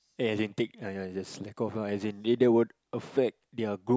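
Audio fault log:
No technical faults are present in this speech recording; the signal is intact and continuous.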